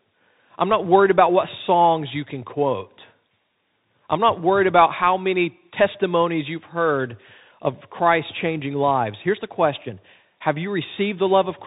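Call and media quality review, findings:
Bluetooth CVSD headset codec, throughout. Band stops dead near 4 kHz, s sounds scratchy, grainy hiss under speech, loud bright bits distorting. Probable cause: headset on narrowband CVSD, sound fits a 64 kbps link. One-bit delta steps can't keep up with sharp transients.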